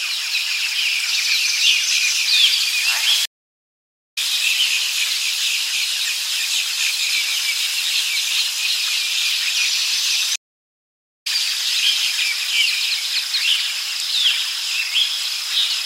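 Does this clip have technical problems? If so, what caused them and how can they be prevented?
Yes. Stream reconnects at 3.25–4.18 s and 10.36–11.27 s: the connection dropped and the audio fell silent for about 0.9 s. A fresh decoder then resumed roughly a second and half a second further on, skipping material. A larger client buffer with automatic retry before playback starves prevents this.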